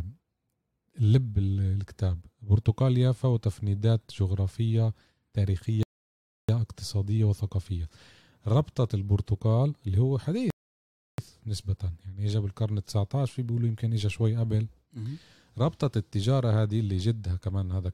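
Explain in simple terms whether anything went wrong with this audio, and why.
The speech stops dead twice, at 5.83 s and 10.50 s, going silent for about two-thirds of a second each time before carrying on exactly where it left off. This is a rebuffering stall: playback ran out of downloaded audio and waited for more. Nothing is skipped; only time is added.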